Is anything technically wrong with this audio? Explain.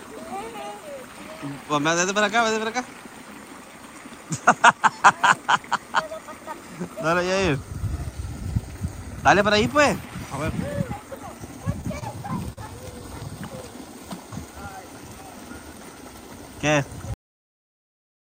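Yes, there are two problems.

From 11.81 to 12.59 s there's a burst of repeated stalls (stutter). Packets arrived late, so the jitter buffer ran dry five times, the longest for about 41 ms. Each time the receiver stretched the last sound to cover the gap, roughly 98 ms in all. Nothing is lost, but the audio drags and hiccups there.

Then there's a cut-off end at 17.14 s. The final buffers were never written out, so the audio stops mid-sound and drops straight into digital silence with no natural decay. That dead silence runs right to the end of the clip.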